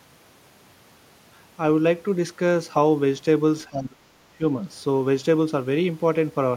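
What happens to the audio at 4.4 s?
The speech dips briefly from 4.38 to 4.44 s. It is a short dip, roughly 70 ms in all, and the level falls by about 15 dB at its deepest. It sounds like speech suppressed in double talk. The likely cause is an echo canceller that heard both sides at once. It could not tell the near talker from the loudspeaker echo, so it pulled the level down.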